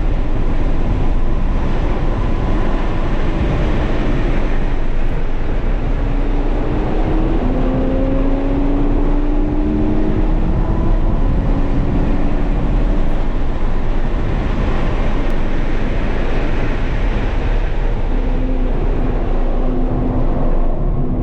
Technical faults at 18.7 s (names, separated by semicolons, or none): compressed frames skipped